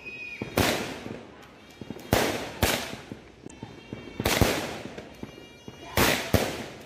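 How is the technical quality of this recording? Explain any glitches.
One glitch stands out. From 3.46 to 3.52 s, damaged data in the compressed stream makes the decoder misread frames and lose sync, producing a brief glitch.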